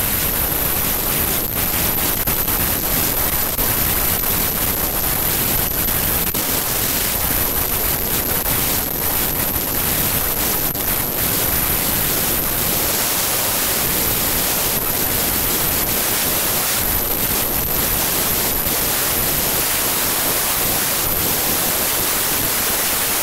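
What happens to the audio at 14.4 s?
At 14.4 s you're hearing the wrong sample width fault that runs through the whole clip. The 32-bit integer data is being read as packed 24-bit, so most samples mix up bytes. That gives loud noise with the speech buried inside, playing at 0.75 times speed and lower in pitch.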